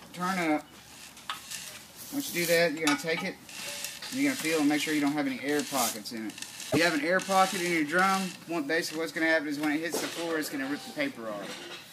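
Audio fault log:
6.68–6.77 s, damaged data in a compressed stream: a short garbled blip as the decoder misreads corrupt frames and hunts for sync.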